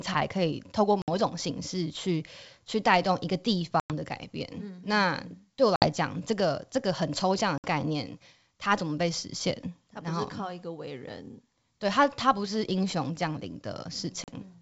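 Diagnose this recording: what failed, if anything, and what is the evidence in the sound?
Packet loss on an ADPCM call at 1.02, 3.80, 5.76, 7.58 and 14.24 s. Network drops leave hard-edged silent holes of 40 to 100 ms, and then the decoder's mismatched predictor and step size briefly distort the speech's return.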